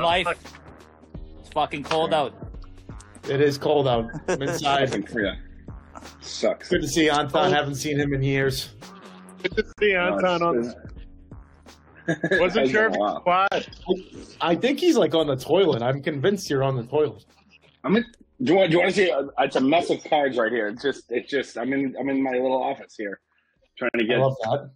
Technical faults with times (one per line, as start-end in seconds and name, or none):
9.73-9.78 gap at a join of encoded pieces
13.48-13.52 gap at a join of encoded pieces
23.89-23.94 gap at a join of encoded pieces